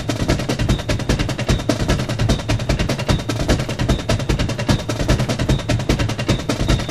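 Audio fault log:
The music signal stays intact and continuous, with nothing in the audio path interrupting or altering it.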